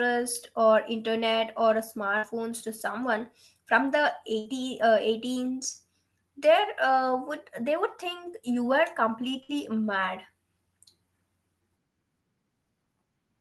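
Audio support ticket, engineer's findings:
Burst of packet loss at 2.17–2.26 s (after "or internet or"), 4.39–4.48 s (after "to someone from the") and 9.43–9.52 s. Concealment holds and fades the last sound for about 55–60 ms, then jumps ahead with about 60 ms of speech missing. On the spectrogram, smeared, decaying harmonics end in an abrupt onset. On the waveform, a shrinking, repetitive envelope ends in a discontinuity. Probable component: the jitter buffer and packet-loss concealment in the Opus call path, where the spectrum tops out near 12 kHz.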